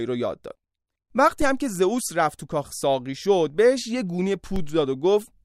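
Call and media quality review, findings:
DC step at 1.42 s and again at 4.56 s in the speech: low thump each time, speech itself unaffected. Zero line jumps by about -17 dBFS, then decays back, like a 2 Hz high-pass bleeding it off. Probably converter recalibration or an offset input switching in.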